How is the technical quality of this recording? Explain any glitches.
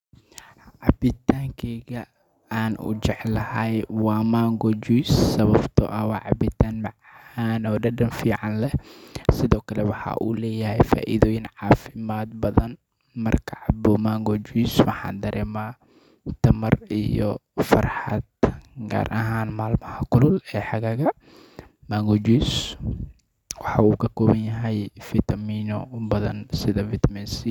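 Nothing stands out as a problem here; the speech runs along without any glitch worth pointing out.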